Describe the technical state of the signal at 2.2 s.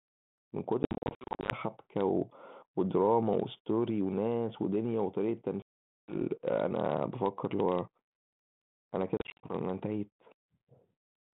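At 2.2 s the speech is intact, with no fault, and only the narrow telephone band and light coding texture of the normally working 32 kbit/s G.726 ADPCM path can be heard.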